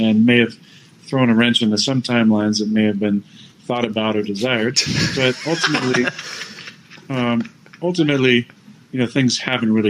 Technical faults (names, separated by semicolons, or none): none